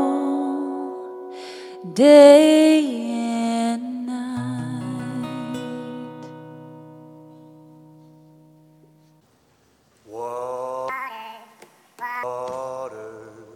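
Audio read two samples at a time (double speed), 10.89 to 12.23 s: pairs of samples are taken as single frames, so sound runs twice as fast and an octave higher.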